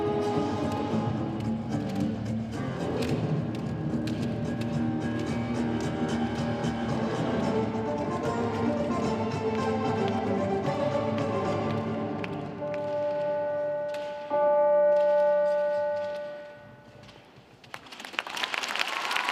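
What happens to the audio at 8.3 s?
At 8.25 s there is a single sharp click, likely from dropped samples: well under a millisecond of the stream is missing, so the waveform jumps abruptly to a later value. A spectrogram shows one thin vertical line spanning all frequencies.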